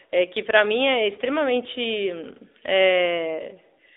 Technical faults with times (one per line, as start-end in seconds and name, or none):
0.00-3.96 AMR narrowband mobile codec